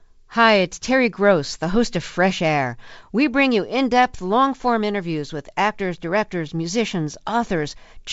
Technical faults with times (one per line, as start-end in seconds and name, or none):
none